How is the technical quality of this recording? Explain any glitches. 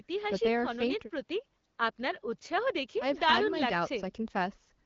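There are no glitches to point to in this speech recording. It comes through an AMR wideband (HD Voice) link at 12.65 kbit/s, where the codec leaves only light traces and the speech stays clear.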